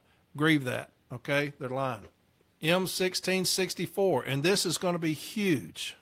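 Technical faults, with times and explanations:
No technical faults can be heard in this speech recording. Nothing in the audio calls for a time or an explanation.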